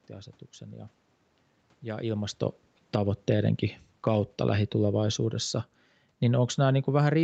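From 2.8 to 5.61 s automatic gain falling pulls the level down about 8 dB, and it falls again from 6.23 s to the end, so the speech and room noise sink together.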